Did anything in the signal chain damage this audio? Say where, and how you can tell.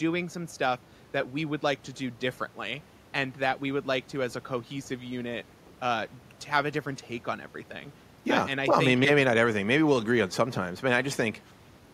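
No; just room noise, about 30 dB under speech.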